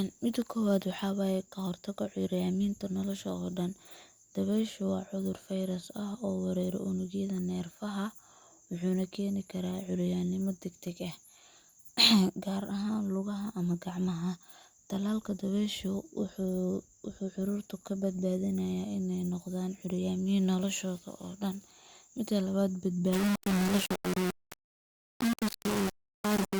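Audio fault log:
23.13–26.60 s, low bit depth without dither: speech turns harsh and grainy, with the error nearly as loud as the voice, likely undithered rounding to about 4 bits.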